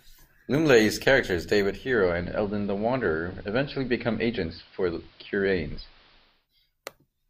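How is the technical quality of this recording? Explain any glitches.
The recording has one clear fault, a digital radio blend to analogue. From 1.60 s to 6.48 s, the receiver loses its digital signal and cross-fades over 0.39 s to the station's AM broadcast. Hiss rises to roughly 30 dB below the signal, and the level drops about 1 dB. It then fades back to digital.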